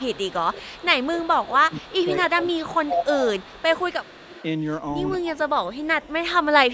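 A speech recording with two kinds of call fault. Echo leak runs from 0.0 to 2.07 s, 2.45 to 4.44 s and 5.64 to 6.73 s. A faint copy of the speech returns 235 ms late, roughly 20 to 25 dB below the main level. The likely cause is a far-end loudspeaker echo the canceller failed to remove. Speech suppressed in double talk occurs from 1.11 to 3.49 s and 5.22 to 5.46 s. The talker dips by up to about 20 dB, then about 15 dB. An echo canceller likely cut the talker along with the loudspeaker echo during overlapping talk.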